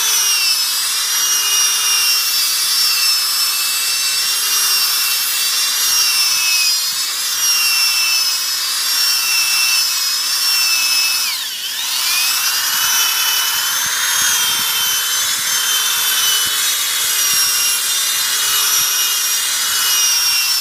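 At 1.28 s a bit error spike appears: one sample jumps to about -5 dBFS when a flipped bit throws its value by a power of two, giving a single sharp tick. The waveform shows a lone one-sample needle, and the spectrogram a thin full-band vertical line.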